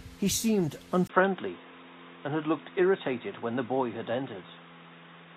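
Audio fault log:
1.07 s to the end, input switched to a poorer device: after a gap of about 20 ms, the speech turns dull and boxy, with nothing above 3.8 kHz, and a different noise floor roughly 35 dB below it. The level stays about the same. The likely cause is the recording moving to another microphone or a headset's call profile. The brief silence and the changed background noise set it apart from a simple bandwidth cut or low-pass filter.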